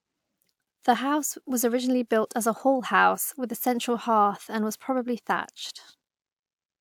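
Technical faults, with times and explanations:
Nothing in the speech stood out as a technical problem on listening.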